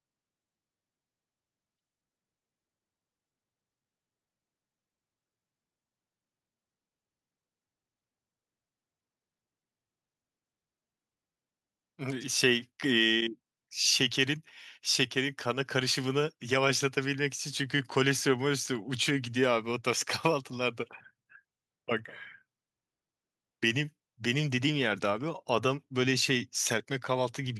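No technical faults are audible.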